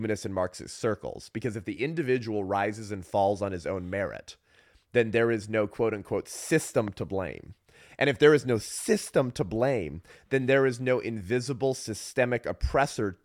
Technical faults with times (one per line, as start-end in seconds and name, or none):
6.88-6.90 loud pop